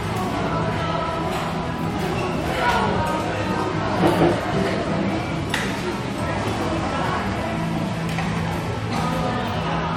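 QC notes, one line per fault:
Throughout: transcoding between lossy codecs. Nothing is present above 16.6 kHz, and two different kinds of coding artefact sit on top of each other. This is likely a first lossy encode re-encoded by a second codec, with artefacts that fit Vorbis near 63 kbit/s followed by AAC-LC near 64 kbit/s. The later encoder spends bits reproducing the earlier damage and adds its own. A single low-bitrate encode would show only one artefact character.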